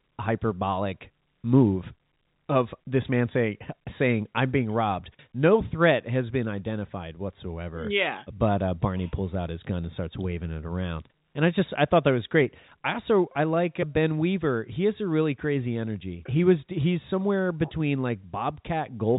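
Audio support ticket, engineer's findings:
Nothing stood out on listening to this speech; it carries the narrow telephone sound of G.711 coding, with nothing heard above about 3.8 kHz.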